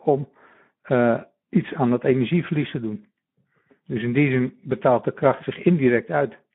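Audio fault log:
Throughout, Speex codec: the speech sounds hoarse and noisy because too few bits remain for the excitation, which fits a bitrate near 11 kbps. A spectrogram shows smeared harmonics with noise between them, confined to a 150 Hz to 3.4 kHz band.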